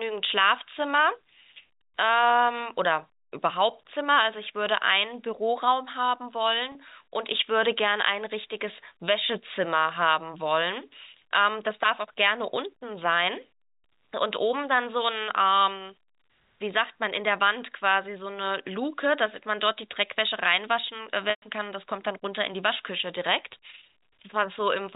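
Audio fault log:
6.72 to 6.75 s and 21.30 to 21.42 s, packet loss with pitch repetition: the receiver concealed the missing audio by repeating the last pitch period. The 30 ms gap, about one packet, becomes a brief buzzy hold. The 120 ms gap fades toward silence before the sound returns through a short cross-fade.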